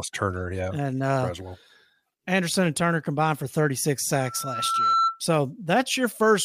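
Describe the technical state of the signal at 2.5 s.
At 2.5 s the speech signal is intact, with no dropout, distortion or other fault audible.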